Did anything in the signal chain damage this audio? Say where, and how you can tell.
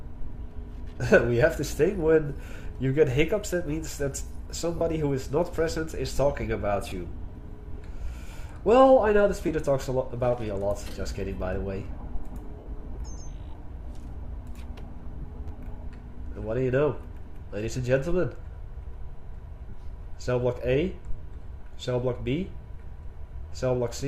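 Yes. Lost LE Audio frames at 4.78–4.81, 6.90–6.92, 9.48, 12.59–12.66, 15.22–15.24 and 19.69–19.73 s point to the Bluetooth link. Each gap of 10 to 70 ms is filled by the LC3 decoder repeating the last spectrum with scrambled phase, so tones smear into brief noisy blurs.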